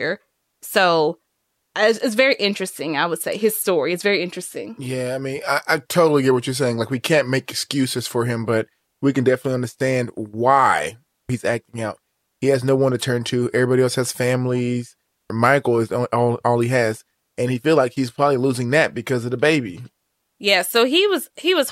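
No technical faults are audible anywhere in the recording.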